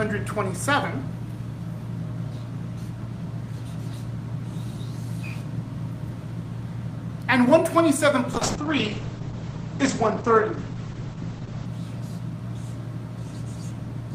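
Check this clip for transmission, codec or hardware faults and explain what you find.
One transmission fault: a call bitrate drop from 8.35 to 11.73 s. The bandwidth estimate collapsed, pushing the encoder from what sounds like 32 kbps to around 9 kbps for about 3.3 s. It quantised far more coarsely and narrowed the coded band from 20 kHz to 8 kHz, so the sound turns rough and muffled until the rate recovers.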